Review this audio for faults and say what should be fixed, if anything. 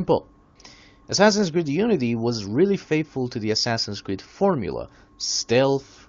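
There's a short patch of AMR comfort noise from about 0.43 to 0.55 s, roughly 120 ms where the phone decided nothing was being said and stopped sending speech frames. The receiver covered that gap with smooth synthetic noise built from a rough level-and-spectrum sketch, so the real background briefly swaps out for a flatter hiss. The wideband codec's clean sound fits a high HD Voice rate. To prevent it, loosen the voice activity detection's silence threshold or hangover, or turn off DTX for this link.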